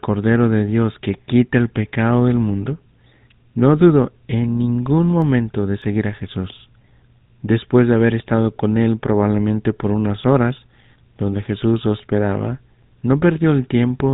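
From start to finish the speech carries plainly audible GSM full-rate codec damage. The coder rebuilds the vocal tract from a filter excited by sparse, regularly spaced pulses, which leaves a buzzy, gravelly texture and a band cut off at 4 kHz, consistent with the 13 kbps full-rate coder.

Right after "no dudó en ningún", from 5.22 to 6.02 s, five CD scratch ticks repeat at a steady rate. A blemish on the disc exceeded error correction once per revolution, so the player patched or muted the damaged samples each time, up to about 2 ms.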